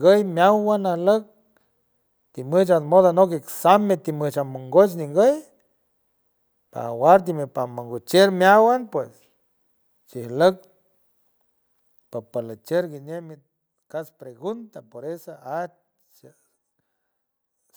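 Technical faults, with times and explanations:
No technical faults are audible in this speech.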